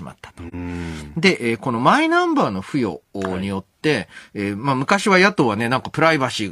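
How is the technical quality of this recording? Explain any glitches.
There is one audible dropout in this speech recording, early on. AAC frame loss with muting occurs at 0.48 to 0.54 s. A block of coded audio roughly 43 ms long, consistent with a single lost frame, was decoded as silence. The overlapping windows fade the sound out and back in, leaving a brief soft-edged gap.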